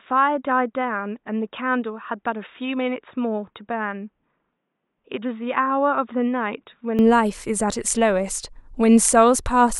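A speech clip whose sound is dull and boxy from the start until 6.99 s. Over that stretch nothing is present above 3.8 kHz, and the level sits about 5 dB lower. A faint new background noise sits well below the speech. At 6.99 s the sound opens up abruptly, with no gap at the change. This points to the input switched to a poorer device, likely a headset call profile or a lesser microphone that was active for the first seven seconds.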